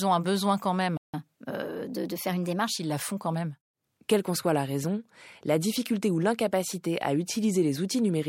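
At 0.97 s the speech cuts to complete silence for about 164 ms, resuming at 1.14 s exactly where it broke off. This is a playback stall, likely the player's buffer running dry. It differs from a dropout because nothing is skipped: the sound pauses, then continues.

From 1.14 s to 2.77 s comes catch-up at higher speed. The player works off its backlog by resampling at 1.1 times normal rate, so the speech runs faster and rises by roughly one and a half semitones. Unlike a pitch-shift fault, tempo and pitch move together and both settle back at 2.77 s.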